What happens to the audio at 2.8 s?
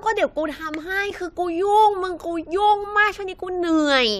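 Nothing goes wrong at 2.8 s; the speech carries on intact through that moment.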